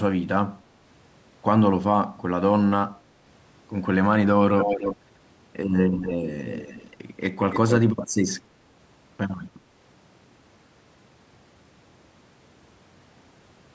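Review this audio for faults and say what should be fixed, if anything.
Echo leak at 4.59–4.96, 5.89–6.17, 6.38–6.90 and 7.51–7.77 s. A delayed copy of the speech arrives 285 ms late, sometimes nearly as loud as the speech. It is likely the far end's loudspeaker output getting past its echo canceller. A spectrogram shows the harmonic pattern duplicated 285 ms to the right, and the waveform shows trailing bursts.

To prevent it, improve the far end's echo cancellation or have that participant use a headset instead of a loudspeaker.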